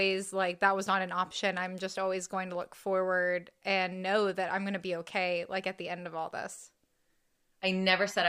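Nothing is technically wrong with this speech recording.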